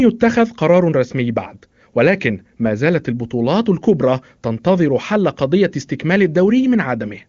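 No technical faults can be heard in this speech, which carries the expected AMR wideband (HD Voice) codec at its top rate of 23.85 kbit/s, with the band ending at 7.2 kHz as that path allows.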